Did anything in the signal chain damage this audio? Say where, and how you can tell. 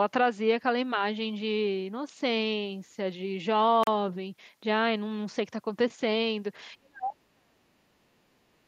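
Yes. Between 3.83 and 3.87 s the speech drops to dead silence for about 37 ms, then resumes. That points to the playback stage, most likely a Bluetooth stall: interference delayed packets, the headphones' buffer emptied, and audio paused until resent packets arrived.

From 6.78 s to 8.67 s the talker keeps getting pushed down, sinking as much as roughly 40 dB, for around two seconds in total. That's likely call processing: speech suppressed in double talk, with the echo canceller unable to separate the talker from loudspeaker echo and ducking both.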